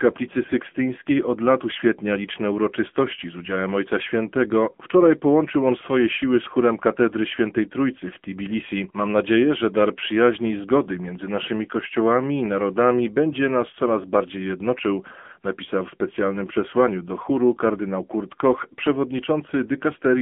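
From start to finish the speech passes through an AMR narrowband mobile codec. Everything above 3.6 kHz is gone, and the low end thins below about 200 Hz. A spectrogram shows a flat ceiling near 3.4 to 3.6 kHz with empty space above. The vocal-tract model rebuilds each 5 ms from a few pulses, so the voice sounds plainly buzzy and synthetic. That degree of damage fits a low AMR-NB mode near 8 kbps.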